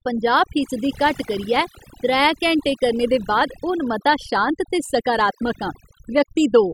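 From start to finish the speech carries overdone noise removal. A noise reduction stage set far too strong shuts individual frequency bands down whenever they sit near its noise estimate, taking the softer parts of the voice along with the noise. The pauses drop to near silence dotted with twinkling specks. Unlike a bandwidth cut, the damage comes and goes band by band rather than removing one fixed range.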